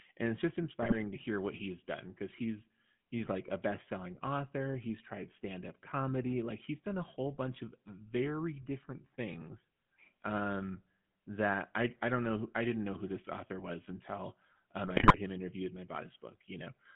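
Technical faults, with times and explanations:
Throughout: GSM full-rate codec. The speech has a buzzy, gravelly roughness and a narrow telephone band of about 150 Hz to 3.4 kHz. The codec rebuilds the voice from a vocal-tract model driven by sparse pulses at 13 kbps, and the damage is plainly audible.
0.82 to 0.95 s: GSM bit errors. After "and it's just" the voice breaks into squawks and gargling before "to hear what he's". Corrupted filter, pitch and gain values reached the decoder, which fits roughly five damaged frames. The spectrum bends and the level jumps.
14.86 to 15.18 s: GSM bit errors. After "this author was until" the speech turns to pops and gargling until "him interviewed and I". This burst is longer, which fits around fifteen frames decoded from flipped bits. Each frame's shape and loudness go wrong.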